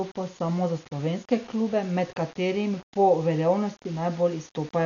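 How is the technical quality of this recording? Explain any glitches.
The technical quality is poor: two faults run through the whole speech recording, one adding grainy distortion and the other dulling and roughening the sound.

Low bit depth without dither, throughout: the speech was likely rounded to very few levels, which fits about 6 bits, with no dither added. Because the rounding error follows the waveform, it acts as distortion rather than steady hiss, sitting roughly 25 dB below the speech. Quiet stretches and the tails of syllables sound gritty and grainy, and the texture shifts as the speech moves.

Dolby Digital compression, throughout: the audio shows signs of likely AC-3 style coding at a low bitrate, which fits something around 48 kbps. At that rate the encoder narrows the band and leaves many frequency lines without real detail, filling them with noise on decoding. Here nothing is present above 6.9 kHz, so the speech sounds dull and muffled, and the damage is heavy, with a rough, fluttering noise clinging to voiced sounds.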